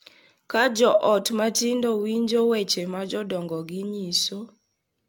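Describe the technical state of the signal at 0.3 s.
At 0.3 s the signal shows generation loss, present across the whole clip. The speech was likely decoded and re-encoded about seven times through a lossy codec, consistent with AAC-LC at around 96 kbit/s. Each pass requantised on a shifted frame grid, so the errors accumulated. The result is swirly, smeared and hollow, with blurred attacks and spectral gaps, more degraded than that bitrate alone would produce, and nothing above 17 kHz.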